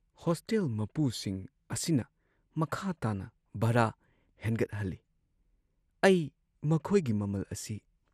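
A speech recording carrying MP2 compression damage across its whole length, plainly audible from start to finish. The top end is dull, as though upper frequency bands have been dropped, and the remaining sound has a gurgling, grainy roughness where too few bits are spread across the sub-bands that survive. The likely cause is MPEG Layer II encoding at a starved bitrate, with the degree of damage fitting something around 80 kbps.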